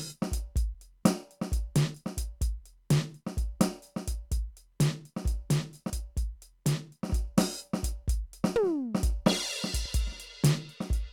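At 1.94 s the music skips forward. Roughly 40 ms is gone, and the two sides butt together with no gap of silence. The same jump returns at 9.86 s. This is audio missing between chunks. The likely cause is a recorder or processor working in 4 s blocks and dropping a sliver at each handover. The two skips sit about two blocks apart, which fits that rhythm.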